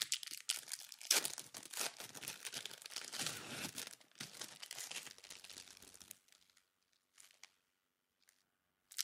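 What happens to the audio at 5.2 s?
At 5.2 s you're inside a padded block size mismatch that runs from 5.09 s to the end at 9.04 s. Each block is written short and zero-filled to what fits a 512-sample read, giving a 93.8 Hz buzz while the sound plays at 0.625 speed, pitch roughly unchanged.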